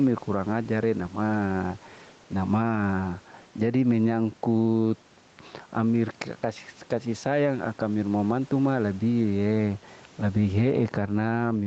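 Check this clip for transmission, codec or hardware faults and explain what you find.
One fault runs through the whole speech clip: gain pumping. The gain swings by about 10 dB. This is likely an input gain set far too high, with a fast limiter pulling it down on each peak. Loud and soft passages sit close in level, so the speech sounds squashed. There is also room noise, about 34 dB below the speech.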